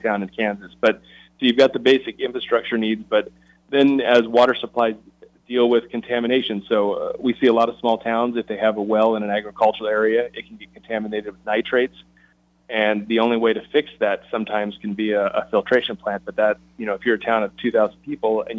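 Nothing stood out as a technical problem on listening.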